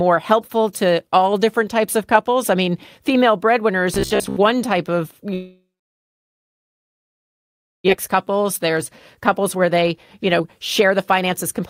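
Speech in this clip turns to a rigid, metallic buzz from 3.94 to 4.36 s, fixed at 66.8 Hz while still roughly tracking the syllables. The likely cause is robotic sound from repeated short buffers: with new audio arriving too late, the receiver looped the last piece of roughly 15 ms, so most of that stretch is repeats rather than real speech. From 5.33 to 7.90 s what is likely a long network dropout follows. The last sound carries on and fades, then about 2.2 s of silence sits before speech resumes. Roughly 1.6 s of material never comes back, and the delay grew by about a second. Two jitter buffer speed-ups then trim that backlog, with the receiver cutting out short pitch-period slices so pitch holds steady while pace rises. From 8.14 to 8.77 s the talk runs at 107% speed, removing roughly 50 ms. From 9.20 to 11.62 s it runs at 113%, removing around 300 ms and sounding noticeably hurried.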